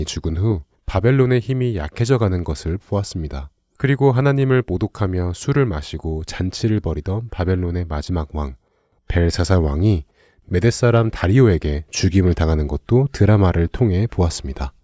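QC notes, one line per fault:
No technical faults are audible anywhere in the signal.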